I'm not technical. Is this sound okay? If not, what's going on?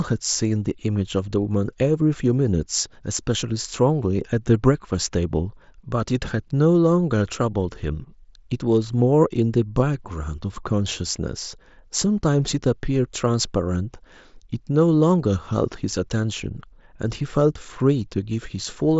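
Yes, this sound is okay, with nothing going on that needs fixing.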